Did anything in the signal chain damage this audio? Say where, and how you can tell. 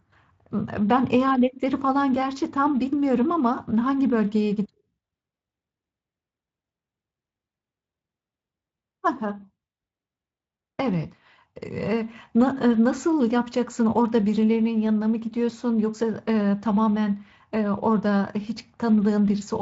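No, nothing in the chain has damaged this speech; it has passed through a Speex codec at a high setting, which fits a rate of about 28 kbps, and that stage is doing its job without introducing any fault.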